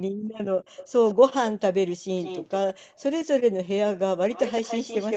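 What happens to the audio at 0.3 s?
The background is gated by the echo canceller from 0.09 to 0.34 s: with the far end playing, it clamps the mic about 40 dB, so the room tone drops out, then returns.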